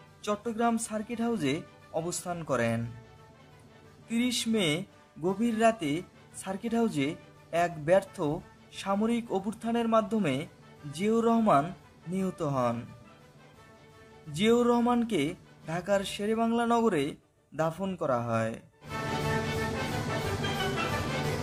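No technical faults can be heard anywhere in the audio. Nothing in it needs a timestamp or an explanation.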